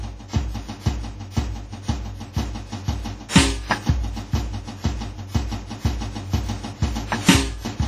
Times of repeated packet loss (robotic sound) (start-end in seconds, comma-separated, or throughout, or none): none